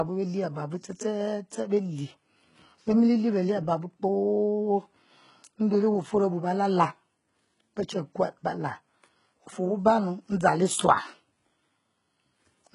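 Throughout the speech, the encoder has likely applied HE-AAC compression at a rate consistent with about 12 kbps. It codes only the lower spectrum and rebuilds the treble from copied bands. The damage is heavy: nothing sounds above 11.1 kHz, and s sounds turn gritty and metallic.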